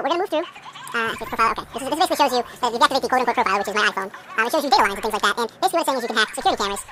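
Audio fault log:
Throughout: audio read two samples at a time (double speed). Every pair of stored samples is consumed as a single frame, so the material plays 2x fast and a full octave high, 12 semitones up. Any content above a quarter of the sample rate no longer fits and folds back down. On a spectrogram, every feature sits at twice its natural frequency and is squeezed to half its duration. The waveform looks horizontally compressed.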